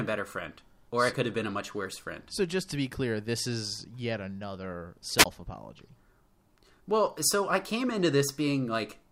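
At 5.17 s, just after "this is yet another", the speech breaks with a wireless microphone squelch dropout lasting until 5.26 s. The radio link from the transmitter weakened. Hiss rose as the signal faded. The receiver's squelch then cut the output to near silence for about 19 ms. The signal recovered and the voice came back. The whole event lasts under a tenth of a second. It sounds like a quick static flutter with a tiny gap inside it.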